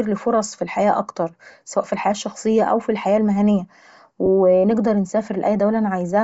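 A speech clip with a breathy, grainy edge on every syllable throughout. The upper spectrum sounds hollowed out and refilled with hiss, the mark of heavy low-bitrate transform coding, most likely Bluetooth LC3 compression at a rate around 32 kbps with 7.5 ms frames. On a spectrogram the high band looks patchy and speckled rather than showing clean harmonic streaks, with energy flickering block by block at a short, regular frame spacing. Lost LE Audio frames briefly replace the sound with a noisy smear from 1.51 to 1.54 s, just after "فرص في الحياة اكتر" and before "سواء في الحياة الشخصية". The decoder repeats the last spectrum with scrambled phase, and the gap's length fits about three dropped 7.5 ms frames. A shorter dropout at 4.26 s, right after "الشخصية أو الحياة المهنية", fits a single lost frame. On a spectrogram each dropout shows as a narrow vertical band where harmonic lines dissolve into diffuse noise. 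The waveform shows a short stretch of rough, noise-like texture there instead of periodic cycles.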